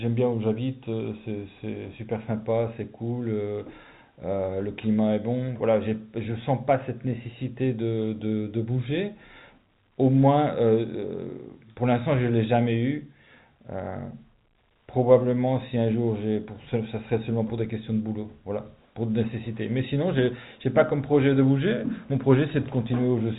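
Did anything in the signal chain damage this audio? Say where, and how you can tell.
No, nothing in the chain has hurt this speech; it's simply carried over an ordinary G.711 A-law phone line, which is why the top end stops around 3.8 kHz and leaves that familiar narrowband telephone sound.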